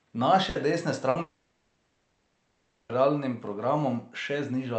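Burst of packet loss at 0.49 to 0.58 s and again at 1.09 to 1.18 s in this speech: each time the receiver stretches the last sound for about 60 ms as a fading buzz or hiss, then resumes further on with that audio gone. From 1.21 to 2.92 s the speech is replaced by about 1.7 s of concealment, a fading buzz or hiss that never reaches full silence, likely a long network dropout, after which the speech returns with the missing stretch skipped. Throughout, the Opus call path limits the audio to about 8 kHz.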